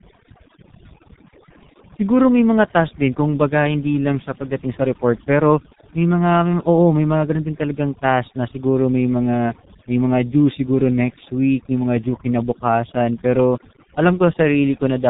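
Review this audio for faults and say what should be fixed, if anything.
Overdone noise removal runs through the whole speech clip: the suppressor pushed individual frequency bands to near zero wherever they resembled its noise estimate, so the background drops and breaks up into twinkling specks. A spectrogram shows scattered isolated bright dots in dark gaps, with ragged holes in the harmonics. Set the reduction to a gentler amount and leave a small noise floor in place.

The G.723.1 codec also affects the entire clip, and the damage is heavy. Nothing passes above 3.8 kHz, so the speech is muffled and hoarse, with blurred consonants; the coarseness fits the 6.3 kbit/s mode and its slow 30 ms frame updates. A spectrogram shows a hard ceiling at 3.8 kHz with smeared, blocky harmonics. Use a wideband codec at a higher bitrate for capture or transmission.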